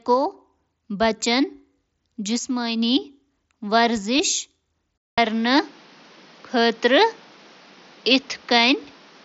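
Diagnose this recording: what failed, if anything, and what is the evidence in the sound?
The failure sits at the capture stage, where the input was likely switched to a poorer device. At 4.98 s a gap of about 200 ms opens, and from there to the end the top of the band stops at 6.6 kHz instead of near 7.7 kHz through the mSBC link. A new background noise appears roughly 30 dB under the speech, with no real level jump. A codec bandwidth change would not bring a silent gap or a fresh noise floor.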